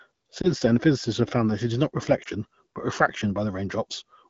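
Lost AMR speech frames: a single 20 ms frame fails its checksum at 0.42 to 0.52 s and again at 2.23 to 2.28 s, and the AMR-WB decoder stands in with the previous pitch and vocal tract settings at lowered gain. Each loss sounds like a brief dip or warble.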